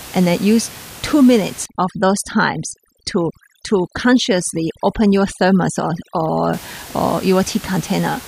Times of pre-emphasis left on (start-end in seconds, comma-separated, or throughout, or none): none